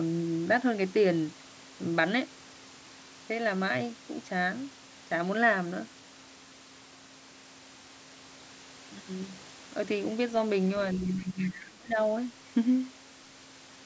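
Speech suppressed in double talk, from 10.99 to 11.98 s: for about a second the speech dips sharply, falling by roughly 20 dB at its deepest. This is likely an echo canceller that, with both sides talking at once, couldn't tell the talker from loudspeaker echo and turned everything down.

Other side's voice leaking through, from 11.19 to 11.65 s: inside that same dip, a second voice appears faintly, around 20 dB below the speech. Its likely cause is residual loudspeaker sound that the echo canceller failed to remove, so the far end reaches the microphone signal, which like the rest of the call path carries nothing above 8 kHz.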